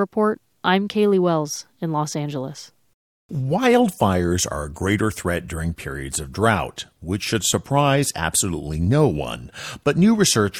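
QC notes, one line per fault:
No technical faults were found in the signal, and the capture and transmission path is intact.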